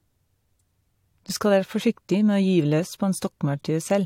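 No technical faults can be heard anywhere in the speech recording.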